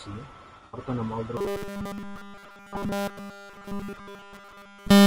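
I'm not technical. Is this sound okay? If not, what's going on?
No. The voice is in trouble in three ways.

From start to finish the voice sounds rough and grainy, with a hiss between its tones and a dull or artificial-sounding top end. That is low-delay AAC compression, the kind used in video calls. It likely comes from squeezing the audio into very short chunks with too little data to describe each one, so fine detail is lost and replaced by noise.

Between 0.57 and 0.79 seconds there is a smeared, noisy, hollow patch. This is AAC frame loss with concealment. Pieces of the audio, about 120 milliseconds in total and the longest gap roughly 70 milliseconds, went missing. The player covered the holes by guessing from the last sound it received, and that guess is what you hear as the brief blur.

From 1.37 seconds to the end the voice becomes a stiff, metallic buzz that only loosely follows the speaking. 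This is robotic sound from repeated short buffers. Fresh audio likely stopped arriving on time, so the software kept replaying the same tiny slice of about 5 milliseconds. It did this for essentially the whole stretch. That constant repetition imposes a fixed 200 Hz drone on the voice.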